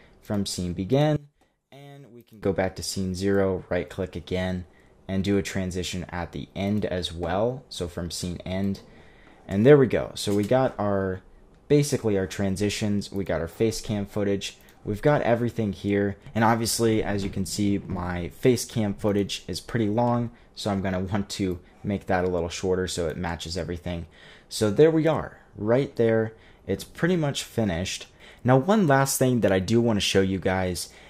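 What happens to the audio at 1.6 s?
At 1.6 s the sound drops sharply, by about 24 dB, a condition lasting from 1.16 s to 2.43 s. This is most likely one channel inverted: with one stereo channel's polarity reversed, everything common to both channels cancels when they are summed to mono, so centred material nearly disappears. What remains is only the difference between the channels, a faint, weak residue of the sound.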